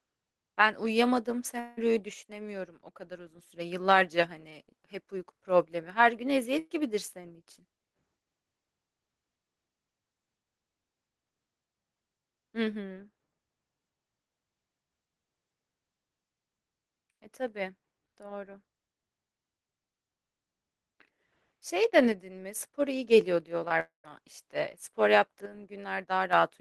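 Right at 1.59 s there's a long network dropout running to 1.79 s. The sound doesn't stop; it turns into a continued tail for about 175 ms and then picks up again, with roughly 180 ms of the speech gone. The likely cause is a stretch where no packets arrived and the receiver extended the last sound until fresh audio came in.

From 2.14 to 3.39 s, one channel drops out. The level falls abruptly by about 6 dB and comes back up at the end. That fits how it behaves when a stereo side goes missing and the result gets summed to mono: whatever both channels share loses half its contribution. The same step happens again from 22.12 to 22.55 s and once more from 25.46 to 26.33 s.

At 6.59 to 6.72 s there's a burst of packet loss. About 120 ms went missing in a row, and the receiver patched roughly 113 ms of it by carrying the last sound forward and turning it down. You hear a held, fading smear, and then the speech resumes a little further on, with the in-between part skipped.

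A short concealed packet loss comes at 23.68 to 23.72 s. Around 20 ms didn't reach the decoder in time and got filled with a continuation of what came just before. It comes across as a quick smear or wobble.

Right after that, from 23.80 to 24.06 s, there's a second long network dropout, and it's the harsher of the two. Roughly 240 ms is lost. The fill fades out and leaves about 130 ms of plain silence before the speech returns. Throughout, the call path tops out around 12 kHz, as you'd expect from Opus at a modest bitrate.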